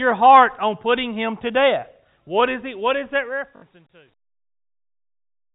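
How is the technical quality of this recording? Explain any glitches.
One glitch stands out in this telephone-band speech recording, in which nothing above 4 kHz comes through.

From 3.56 to 3.62 s there is packet loss with the last packet repeated. About 60 ms of audio went missing, which fits three lost 20 ms packets, and the receiver looped the last good packet to fill the gap. The loops repeat every 20 ms, so the run buzzes at about 50 Hz, heard as a brief robotic stutter.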